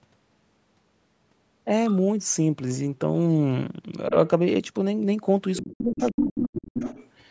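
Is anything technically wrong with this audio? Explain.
Yes. The speech has two echo-cancellation faults.

Other side's voice leaking through, at 1.88 to 1.98 s, 5.55 to 5.63 s, 5.96 to 6.47 s and 6.66 to 7.09 s: the echo canceller likely left part of the far-end loudspeaker signal in the microphone, so a second voice intrudes. It is faint early on and grows nearly as loud as the talker near the end.

Speech suppressed in double talk, from 5.62 to 6.8 s: with both sides talking, the canceller likely could not separate them and attenuated everything. For about a second the talker drops by as much as roughly 35 dB, fading and breaking up beneath the leaking voice.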